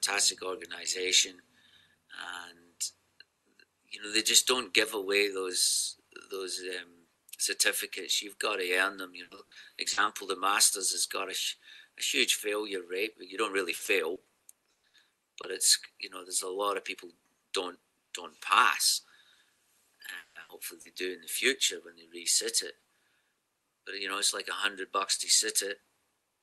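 Audio carried over a call link (its Opus coding, at a rate fitting about 32 kbps, tops out near 12 kHz) suffers repeated packet loss from 9.23 to 10.09 s and again from 13.75 to 14.95 s. Seven gaps in each stretch, the longest 80 ms and then 120 ms, were patched by extending the preceding sound, so about 30% and then 27% of the stretch is filler and the audio turns choppy and robotic with pieces missing. Short concealed packet loss occurs at 15.41 to 15.45 s and 20.81 to 20.87 s, where 20 ms and then 40 ms never arrived in time; the receiver bridged each hole from the last sound and blended back, leaving a brief smear or wobble. From 20.17 to 20.37 s, a long network dropout is the likely cause of a 180 ms hole filled by a fading continuation of the last sound rather than silence, so the audio jumps ahead afterwards. Right after it, a burst of packet loss from 20.41 to 20.51 s removes another 80 ms, heard as a held buzz or hiss that fades before the audio resumes with that part gone.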